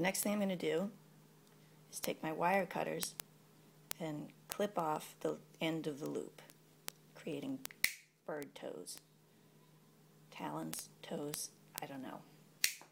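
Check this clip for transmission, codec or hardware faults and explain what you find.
One hardware fault is present. From 0.12 s to 12.88 s there are word clock ticks. The receiver's unlocked clock, off by roughly 400 ppm, slips one sample about every 50 ms, producing evenly spaced ticks of uneven strength with no gaps, unlike dropouts.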